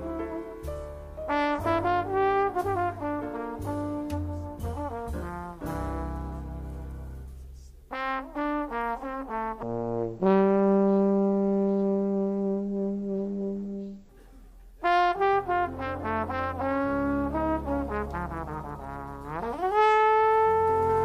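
Stereo read as mono, from 9.63 to 14.09 s. Here the two-channel stream has been taken as a single channel, so the alternating left and right samples are played back to back as if each were the next moment in time. Every stretch of sound is spread over twice as many samples, so it runs at 0.5x speed and drops a full octave, 12 semitones. A fainter mirrored copy of the sound shows up in the upper half of the spectrum.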